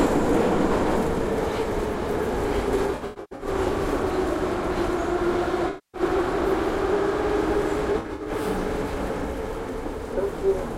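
Everyday sound with AAC frame loss and concealment at 2.76–3.48 s, 5.68–6.01 s and 7.92–8.29 s. Gaps totalling about 384 ms, 256 ms and 192 ms, with runs of around 100 ms and 70 ms in the first and third, are patched from the last good spectrum and sound smeared, noisy or phasey.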